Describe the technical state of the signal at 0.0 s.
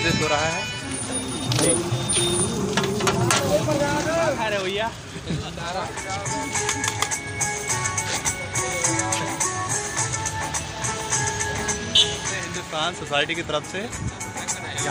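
At 0.0 s the signal is intact, with no audible technical fault at that point.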